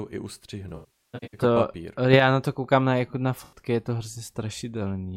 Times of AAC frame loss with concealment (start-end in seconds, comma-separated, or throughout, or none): 0.69-1.41, 3.44-3.59